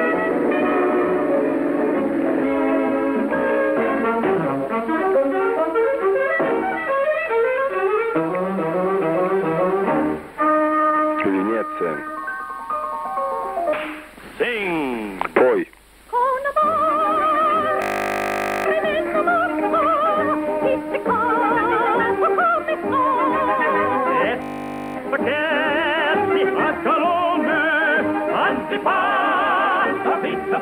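At 17.82 to 18.66 s and again 24.42 to 24.96 s, a system hang loop replays one 20 ms buffer over and over, giving a steady 50 Hz buzz.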